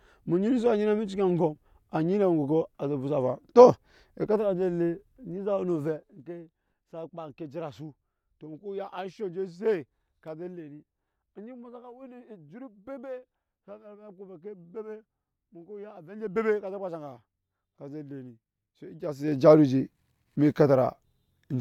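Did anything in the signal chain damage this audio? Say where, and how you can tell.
Yes. Zipper noise appears at 5.72 to 6.24 s, where the level drops by about 15 dB, and at 19.0 to 19.4 s, where it rises by about 15 dB. Gain was applied in unsmoothed 1 dB and then 2 dB steps, roughly 30 a second, so each jump ticks audibly.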